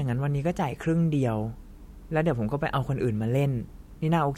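No technical faults can be heard in this speech recording. There is nothing at any point in it that calls for a time or a comment.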